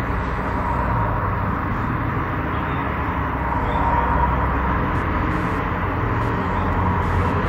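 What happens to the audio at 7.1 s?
At 7.1 s the audio is in a stretch of computer activity noise that starts at 4.95 s and runs to the end of the clip. A buzzy, chirping layer pulsing at roughly 150 Hz sits about 30 dB below the sound. It comes from processor or graphics load shifting the ground the audio circuit shares with the computer. Unlike steady mains hum, it is irregular and follows the computer's workload rather than the sound itself.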